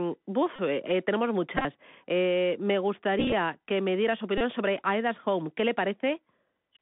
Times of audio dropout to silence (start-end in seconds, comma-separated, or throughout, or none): none